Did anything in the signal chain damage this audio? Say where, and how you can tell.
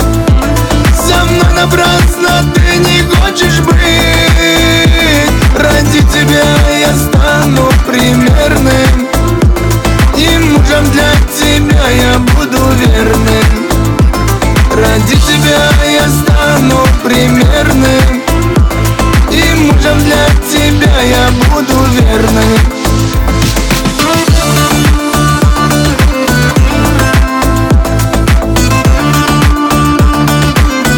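Yes. Hard clipping runs from start to end. The signal was driven about 4 dB past the ceiling of a gain stage, most likely at the converter input or in a fixed-point sample-format conversion. Every loud passage carries a harsh, buzzy fuzz, and roughly one sample in seven sits pinned flat at the clipping level. Those squared-off peaks generate strong upper harmonics that were never in the source, and that is the grit you hear.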